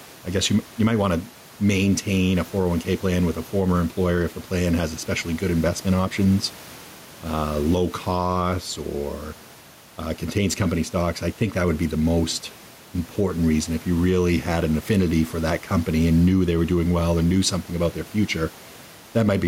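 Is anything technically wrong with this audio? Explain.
Yes. Gain pumping runs through the whole clip: the room noise, about 29 dB below the speech, ducks under each loud syllable and swells back by roughly 5 dB in pauses, likely from excessive gain and a fast limiter. Unlike a noise gate, it never cuts out.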